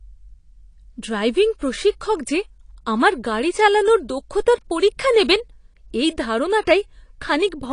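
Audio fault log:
Throughout: AAC compression. Nothing is present above 10.1 kHz, and the speech sounds dull and smeared with plainly audible artefacts, likely from AAC-LC coding at a low bitrate, which fits a 32 kbps stream. The encoder discards the highest frequencies and coarsely quantises what remains.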